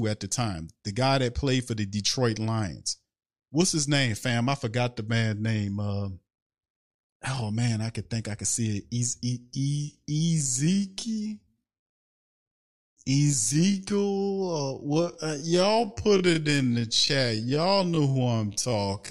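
After "think I could see", from 9.36 s to the end, the speech slows abruptly to 0.52x pace while its pitch holds. That marks a time-stretched section rather than slowed playback, which would lower pitch. Software likely repeated short pieces to lengthen it, leaving it dragging.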